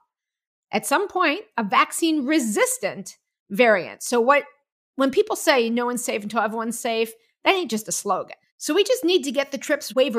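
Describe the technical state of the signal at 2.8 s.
At 2.8 s the signal is intact, with no audible technical fault at that point.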